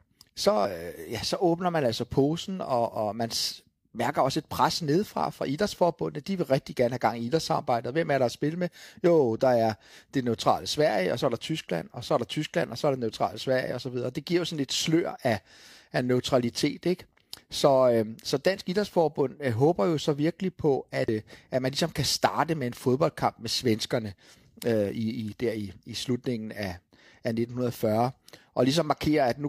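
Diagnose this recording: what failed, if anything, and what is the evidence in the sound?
Driver or buffer stage: at 0.65 s and 21.08 s (between "jo så virkelig på" and "øh at man ligesom"), the speech jumps ahead, losing about a tenth and a fifth of a second. This is likely a dropped buffer (overrun): unread samples were overwritten. The waveform shows a gapless splice, and the spectrogram shows a thin vertical line.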